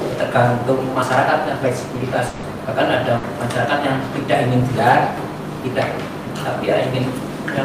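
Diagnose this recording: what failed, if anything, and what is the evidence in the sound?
Audio missing between chunks, most likely at the recorder or processing buffer stage: abrupt skips at 1.02 s and 3.50 s, each dropping something like 20 ms with the two sides butted together. Their 2.5 s spacing suggests segments lost at each chunk boundary.

Long network dropout at the network stage, likely: from 2.27 s to 2.45 s the receiver stops getting audio and fills the full 160 ms by extending the last sound as a decaying buzz or hiss, with no silent tail. The sound then resumes with that stretch gone.

Burst of packet loss on the network path: from 3.17 s to 3.25 s, 60 ms of audio never arrives in time. Concealment holds the preceding sound and fades it across the gap before playback picks up further on, skipping the missing portion.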